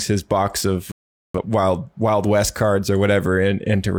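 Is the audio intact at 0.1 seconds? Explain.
Yes, at 0.1 s the speech is intact, with no audible fault at that moment.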